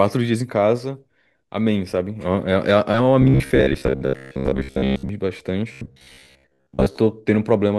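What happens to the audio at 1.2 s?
Nothing goes wrong at 1.2 s; the speech carries on intact through that moment, with no dropout, click or distortion.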